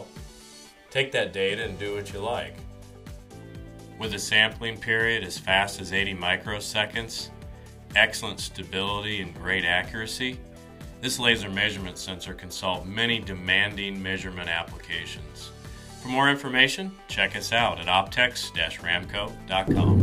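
At 11.39 s there is an underrun with held sample. The output buffer ran dry for about 2.8 ms, and the converter froze on its last value, leaving the waveform flat. That is what separates it from a dropout to silence: the sound stops almost without a click. When data resumes, a few milliseconds of audio are simply missing.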